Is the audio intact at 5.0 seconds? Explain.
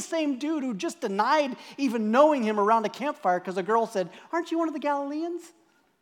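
Yes, the speech at 5.0 seconds is intact, with no fault to be heard at that moment.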